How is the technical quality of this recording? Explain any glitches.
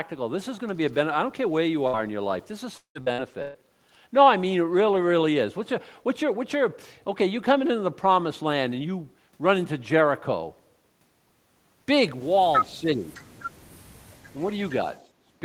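The recording has four audible glitches: two from network packet loss early on, and two from echo cancellation near the end.

From 1.87 to 1.96 s, the sound briefly holds and fades, and then the speech jumps ahead. This is a burst of packet loss. About 58 ms was filled by stretching and fading the last sound, and the speech resumes with about 60 ms skipped.

Between 2.77 and 3.57 s, the speech turns choppy and robotic. This is repeated packet loss: four separate gaps, the longest 178 ms, each patched by extending the preceding sound. About half of that stretch, roughly 412 ms, is concealed rather than real audio.

From 12.68 to 13.12 s, the voice dips by about 15 dB over about 300 ms. This is likely speech suppressed in double talk: the echo canceller couldn't tell the talker apart from the far side and attenuated both.

From 15.14 to 15.36 s, the room background drops by about 15 dB for about 200 ms, then returns. 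This is background gated by the echo canceller, which clamped the microphone hard while the loudspeaker was active.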